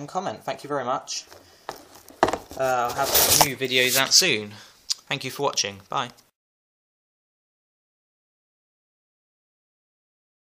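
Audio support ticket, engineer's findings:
No faults found on listening, so there's nothing here that needs chasing on the audio side.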